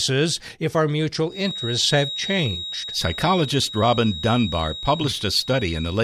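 From 1.26 s, right after "if our", a feedback whistle comes in and holds to the end: a thin, steady 3.8 kHz tone sitting roughly 10 dB under the speech, swelling and fading slowly in level. It's likely a speaker-to-mic loop hovering just at the edge of feedback.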